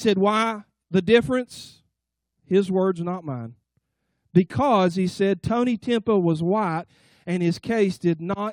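Sample clock jitter runs through the whole speech clip. The converter's clock wanders, so each sample lands a little early or late. The timing error is a few microseconds. Where the waveform changes fast, that small shift becomes a real amplitude error. The result is a faint hiss and grain, about 35 dB below the signal. It rises on loud and bright sounds, such as sibilants. It drops away in the pauses.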